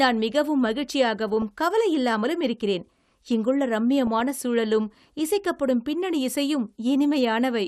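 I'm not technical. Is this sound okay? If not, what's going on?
No. MP2 compression, throughout: the speech sounds dull and plainly gurgly, likely from heavy digital-radio-style compression that drops the upper frequencies and roughens what remains.

DAB burbling, at 1.29 to 1.51 s and 4.07 to 4.20 s: brief blips of noise where reception errors corrupted the broadcast data.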